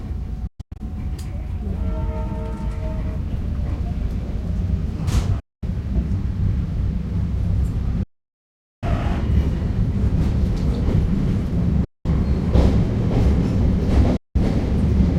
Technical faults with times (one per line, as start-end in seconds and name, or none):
0.47-0.80 Bluetooth dropout
5.40-5.63 Bluetooth dropout
8.03-8.83 Bluetooth dropout
11.84-12.06 Bluetooth dropout
14.17-14.36 Bluetooth dropout